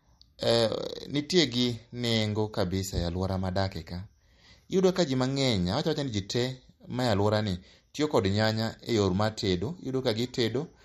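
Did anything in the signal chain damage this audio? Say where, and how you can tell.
Yes, at the codec stage, likely MP3 compression. Throughout, the speech sounds watery and nothing reaches above 13.2 kHz. That fits a starved bitrate near 48 kbps.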